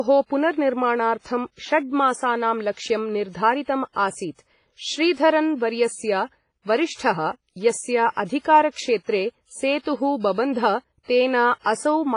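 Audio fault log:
throughout WMA compression. The speech rings and sounds washy, with hiss that swells and fades with the voice. Nothing is heard above 10.1 kHz. Heavy transform coding is the likely cause, fitting a bitrate near 24 kbps, where long blocks smear noise and weak detail vanishes.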